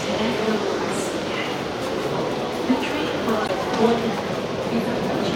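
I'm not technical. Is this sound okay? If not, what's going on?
No. At 3.44 to 3.50 s there is a brief chirp, squeak or blip from a corrupt frame decoded. A couple of damaged chunks of data were played anyway.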